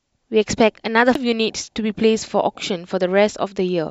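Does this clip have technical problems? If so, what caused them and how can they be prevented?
Yes. There is a CD skip at 1.14 s in this speech clip. The speech cuts to a brief mute of roughly 10 ms, heard as a small tick. It then resumes from a different point, so the speech jumps abruptly. A knock or a flaw on the disc threw the laser onto another turn of the spiral track, and it picked up reading from there. Clean and inspect the disc, and play it on a steady, isolated player.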